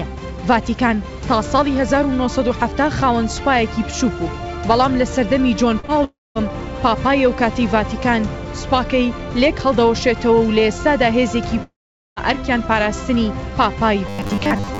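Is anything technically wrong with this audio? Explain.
Yes. There are three kinds of fault.

Short concealed packet loss comes twice in a row, at 5.80 to 5.85 s and 5.85 to 5.90 s. Each time about 40 ms of audio never reached the decoder in time. The receiver bridged each gap by extending the preceding sound, then blended back into the real signal. The result is a quick smear or wobble.

A long network dropout is the likely cause of two longer breaks. The first runs from 6.04 to 6.49 s, with about 0.32 s of audio missing. The second runs from 11.63 to 12.18 s, with about 0.54 s missing. In both, the last sound is stretched into a fading buzz or hiss. Then silence follows, about 0.2 s in the first and about 0.45 s in the second. The audio resumes later, with the gap simply gone.

Robotic sound from repeated short buffers starts at 14.07 s and runs to the end. Most of that stretch is made of the same short slice played again and again. 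This imposes a fixed 100 Hz buzz on the audio, which fits a 10 ms buffer. The sound turns hard and metallic. It still follows the rough shape of the original.

The audio also has no content above 8 kHz, consistent with a G.722 call path.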